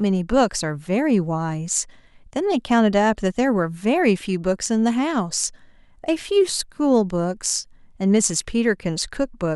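Speech clip with no technical faults to report.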